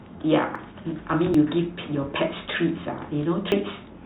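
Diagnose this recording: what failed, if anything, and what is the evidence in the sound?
Dropped buffer (overrun) at 0.56, 1.34 and 3.52 s: the speech jumps ahead with no silence, losing about 20 ms twice and 40 ms at the end. At the driver or buffer stage, the hardware likely overwrote samples before the program collected them.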